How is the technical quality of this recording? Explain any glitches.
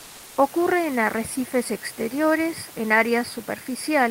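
One fault stands out, at the very start. From 0.00 to 0.37 s, just before "en arrecifes exteriores en", the background is replaced by comfort noise. That stretch has a flat, textureless hiss about 1 dB quieter than the room noise that follows, which sits about 23 dB below the speech. The likely cause is discontinuous transmission, as in Opus DTX: the sender stopped transmitting during silence, and the receiver filled the gap with synthetic noise approximating the background's spectrum until the speech resumed.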